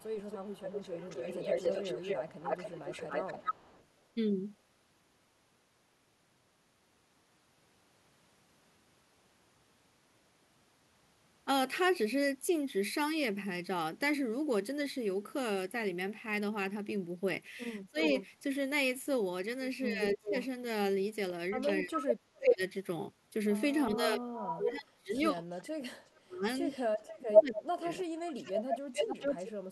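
From 0.0 to 3.85 s a delayed second copy of the speech trails the first by 273 ms, only a few decibels quieter, so it sounds like a doubled voice. This is an echo leak, likely from a far end on loudspeaker whose echo canceller let part of its microphone pickup return down the line. At 17.86 to 18.06 s the voice briefly dips by roughly 20 dB for about 150 ms. This is speech suppressed in double talk, likely caused by an echo canceller that could not separate a local talker from loudspeaker echo while both sides spoke and so turned everything down. Between 18.01 and 18.27 s another echo scrap follows at 370 ms, somewhat quieter. From 19.91 to 20.34 s the speech sinks again, by about 20 dB over roughly a third of a second. From 20.12 to 29.52 s the echo returns at 410 ms and at about the same level as the speech, making two equal, offset voices. Inside that stretch, from 21.85 to 28.89 s, the voice is repeatedly pulled down, in places by about 35 dB, for around four seconds in total.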